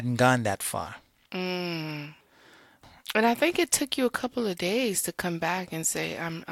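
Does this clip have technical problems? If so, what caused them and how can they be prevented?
Yes. A block of digital silence occurs at 3.09 s, where about 5 ms of the speech drops abruptly to silence and returns with no fade, heard as a tick or dip. This points to an output buffer that was not filled in time. Giving the audio thread larger buffers and higher priority prevents such underruns.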